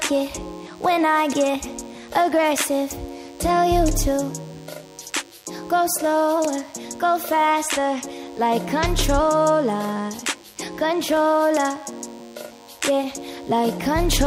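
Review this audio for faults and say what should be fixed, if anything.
There's a DECT cordless phone buzz the whole way through: a thin 100 Hz buzz, well below the signal, from a nearby DECT phone or base station's 10 ms radio bursts being rectified. Keep DECT bases and handsets away from the recording chain.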